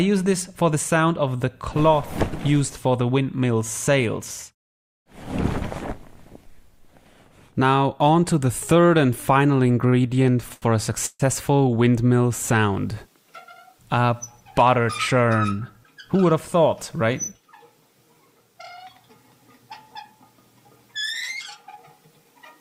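From 9.67 to 10.65 s there are repeated stalls (stutter). Packets arrived late or too slowly, and the jitter buffer kept running dry. The audio halts eight times. Each time the last sound is stretched out to cover the wait. The longest hold lasts 80 ms. Together the holds fill 184 ms, about a fifth of the passage. Nothing is lost. The sound simply drags and hiccups forward.

At 11.06 s there is a call audio freeze, lasting to 11.22 s. The sound stops and is held for 136 ms. The held sound fades, and its last 40 ms are silent. Then the audio resumes exactly where it left off, now 136 ms later. The likely cause is packets held up in transit, which emptied the jitter buffer. Nothing is skipped. A gap has been inserted instead.

From 13.72 to 14.78 s comes a jitter buffer speed-up. The buffer held more audio than its target. To cut the delay, the receiver removed many tiny pitch-period slices, roughly 70 ms in all. 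The sound runs at 107% speed with unchanged pitch. A second speed-up runs from 21.69 to 22.39 s. Again roughly 70 ms is removed, this time at 108%. Both stretches sound hurried.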